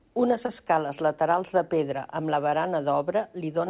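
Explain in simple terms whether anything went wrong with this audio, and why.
Yes, twice, at 0.46 to 0.50 s and 2.50 to 2.54 s, there is short concealed packet loss. About 20 ms of speech never arrived, and the receiver patched each gap by extending the previous sound. You hear a tiny smear or wobble, not silence or a sharp dropout. The phone-style dullness, with nothing above 4 kHz, comes from the call codec.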